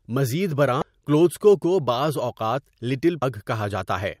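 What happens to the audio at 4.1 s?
At 4.1 s the audio is intact, with no fault to be heard at that moment.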